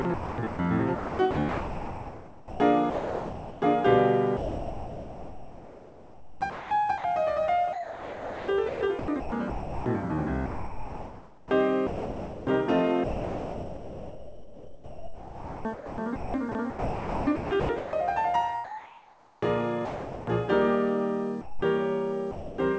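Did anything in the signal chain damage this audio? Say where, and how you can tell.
Yes. In call processing, the music was chopped by the voice detector through 0.02–3.62, 4.37–7.04, 7.73–9.86, 10.46–12.47, 13.04–17.93 and 18.64–20.27 s. Stretches of music repeatedly flip to a smooth synthetic hiss, likely comfort noise from a sender that kept gating transmission. Packet loss would cause brief glitches instead.

Later, the sound was dropped by the voice detector once at 21.41–21.62 s and again at 22.31–22.58 s. Each time the music gives way to steady noise for about a quarter second, then resumes. These are single clean gaps, not chopping, which likely points to quiet passages being misread as background.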